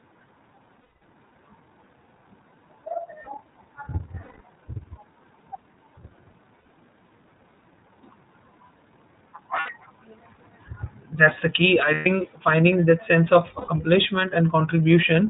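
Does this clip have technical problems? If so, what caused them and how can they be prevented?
Yes. The whole clip goes through the iLBC codec. Nothing above 4 kHz survives, and the speech sounds plainly rough and synthetic, which fits the 13.33 kbps mode with 30 ms frames. A simple low-pass filter would only dull the sound; this also adds a coded graininess. Preventing it means choosing a wideband codec.

Lost iLBC frames appear at 0.84–0.96, 4.23–4.40, 6.65, 9.59–9.70, 11.94–12.07 and 13.58–13.69 s. At each, the gap is filled with a held, buzzy, breathy vowel built from the last pitch cycle. The longest gaps fit about 210 and 180 ms of missing frames. Unlike loss in codecs that depend on earlier frames, the voice comes back clean almost at once. Preventing it means reducing packet loss or adding forward error correction.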